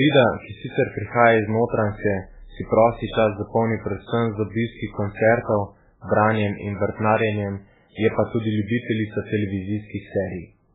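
From start to end, the speech has nothing above 3.8 kHz and the damage is heavy. It sounds watery and swirly, with smeared attacks. This is likely MP3 compression at a very low bitrate, near 8 kbps, cutting treble and dropping weak frequency lines.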